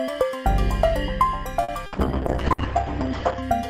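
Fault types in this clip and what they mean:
Short stall from a late packet: A packet arrived late and the jitter buffer emptied, so the receiver held the last sound for about 50 ms, from 1.63 to 1.71 s. Nothing is lost, but the sound is briefly stretched, and playback runs 50 ms later afterwards.
Burst of packet loss: Consecutive packets were lost or arrived too late to play, at 1.86 s and again at 2.52 s. Each time the receiver filled about 60 ms by continuing and fading the last sound, then resumed with 60 ms of audio missing.
Call bitrate drop: The call's bandwidth estimate fell and the encoder went from 96 to 8 kbps between 1.97 and 3.48 s, staying at the lowest rate for about 1.4 s. The audio becomes coarse and muffled, with its bandwidth narrowed from 20 kHz to 8 kHz.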